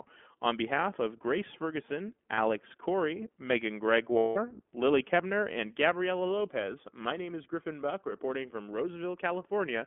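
Speech heard through the iLBC codec. The sound is narrowband, limited to about 200 Hz to 3.4 kHz, with a plainly rough, synthetic edge typical of iLBC's 15.2 kbps mode. Lost iLBC frames cause two gaps, at 2.34–2.39 s (40 ms) and 4.18–4.38 s (180 ms). The decoder repeats the last pitch cycle with noise. Each gap sounds like a held, slightly buzzy or breathy vowel, and the longer one fades before the speech snaps back.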